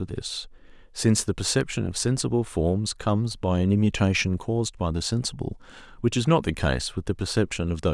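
Dropped samples at 1.61 s: a single sharp click in the speech, seen as a thin vertical line across the spectrum. The likely cause is a fraction of a millisecond missing from the stream, so the waveform jumps to a later value without removing audible sound.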